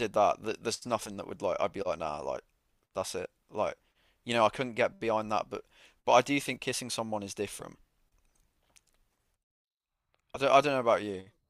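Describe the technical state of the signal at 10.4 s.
At 10.35 to 10.39 s the speech has compressed frames skipped. A couple of whole frames of the coded stream were never decoded, either missing from the file or rejected by the decoder as damaged, so playback jumps ahead by around 20 ms, which fits a 10 ms frame length. The splice is heard as a slight hitch in timing.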